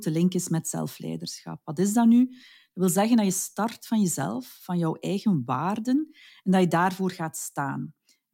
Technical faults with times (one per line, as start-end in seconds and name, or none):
none